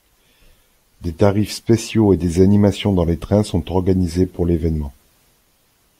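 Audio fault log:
No technical faults can be heard anywhere in this speech recording, and the signal holds steady with nothing that calls for a log entry.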